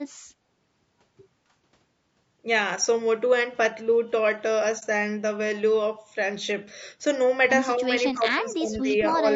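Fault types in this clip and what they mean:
Low-delay AAC compression: The whole recording sounds rough and grainy, with noise between harmonics. This likely comes from AAC-ELD at a low bitrate, around 32 kbps.
AAC frame loss with muting: At 4.79 to 4.83 s the sound briefly dips and comes back. This fits one lost frame muted by the decoder.
Speech suppressed in double talk: From 7.77 to 9.24 s the speech dips, falling by roughly 15 dB and totalling about a second. The likely cause is an echo canceller turning the speech down during overlapping talk.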